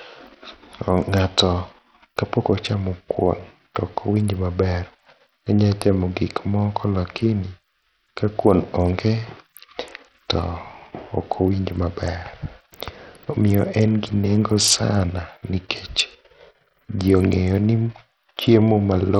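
Bluetooth SBC compression across the whole speech clip: the treble flickers and drops out while a gritty, aliased haze rides on the sound, likely from an SBC link so starved of bits, around 64 kbps, that the top sub-bands go unfunded and the rest are coarsely quantised.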